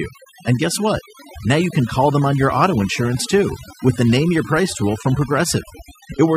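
From start to finish the speech carries overdone noise removal: a noise reducer pushed too hard has pulled individual frequency bands down or out wherever they sat close to its noise estimate. Pauses collapse into near silence flecked with twinkling specks, and softer parts of the voice are pulled down along with them. Unlike a noise gate, which shuts the whole signal at once, the damage here is band by band, scattered across the spectrum.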